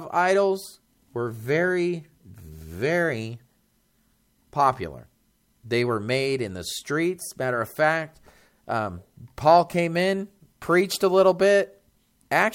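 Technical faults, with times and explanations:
10.64 to 12.54 s, sample clock jitter: after "came in", the converter clock wavers by a few microseconds, so samples land early or late. Steep, loud or bright parts of the speech pick up a rough hiss about 35 dB below the signal, which disappears in the pauses.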